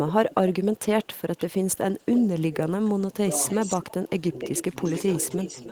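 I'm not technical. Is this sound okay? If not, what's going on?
No. From 0.07 to 2.89 s and again from 3.48 s to the end there is an echo leak: a second, fainter copy of the speech trails the original by about 0.3 s. In the later stretch the copy is louder. This is likely one end of the call playing through a loudspeaker, with its echo canceller failing to remove what its microphone picked back up and sending it down the line.

There is also speech suppressed in double talk: at 2.97 to 3.32 s, briefly at 4.13 to 4.23 s, and at 4.64 to 4.71 s, the speech sinks sharply in level, the last dip being shallower. This likely happened because both sides were speaking at once, and the echo canceller, unable to tell the local talker from the loudspeaker echo, turned everything down together.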